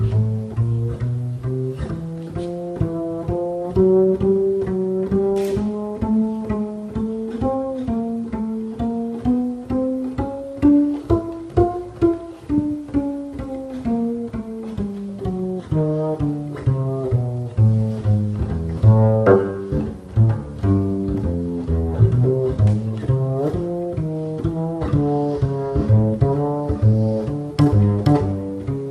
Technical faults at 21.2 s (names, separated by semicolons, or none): MP2 compression